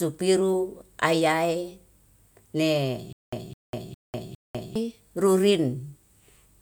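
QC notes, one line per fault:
3.13–4.76 s, stutter with silent gaps: the stream likely stalled, replaying its last 209 ms of speech at each retry before running dry. The same fragment returns four times, every 407 ms, separated by 198 ms of digital silence, and the speech meant for that stretch is lost.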